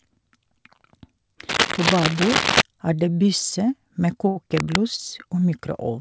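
A speech recording carrying two kinds of fault. Cable scratch noise, dense and irregular rustling about as loud as the speech itself, runs from 1.49 to 2.62 s and again from 4.56 to 4.78 s. The likely cause is a worn cable or connector being moved. Unlike regular digital clicks or codec crackle, it comes in uneven bursts that rise and fall with the handling. Short stalls from late packets fall at 4.28 to 4.38 s (78 ms), 4.96 to 5.00 s (22 ms) and 5.40 s (17 ms). Each time, the sound is briefly held and stretched, with a slight buzz or dip, and then resumes exactly where it left off. What separates these from packet-loss dropouts is that nothing is skipped, and the timing simply drifts later. Throughout, the band stops at 8 kHz, which fits a wideband call path such as G.722.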